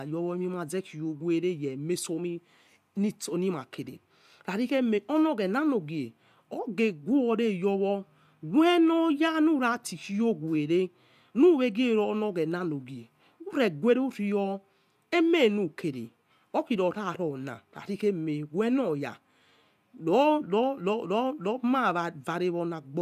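No technical faults can be heard anywhere in the recording. Nothing in the audio path calls for comment at any point along its timeline.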